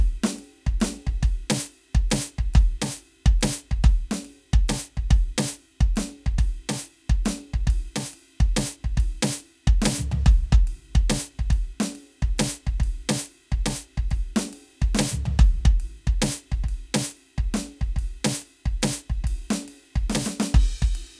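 No technical faults can be heard anywhere in this music. There is nothing in the recording or its playback that calls for a timestamp or an explanation.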